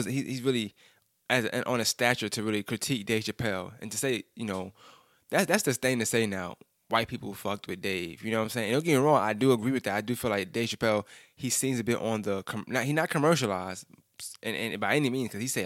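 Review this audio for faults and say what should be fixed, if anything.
No faults; nothing to fix.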